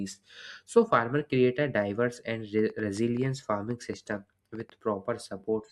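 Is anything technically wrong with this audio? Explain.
Yes. From 1.61 to 4.71 s a train of clicks, about fifteen irregular pulses at roughly 4.5 per second, ticks over the speech at similar loudness, likely from electrical interference.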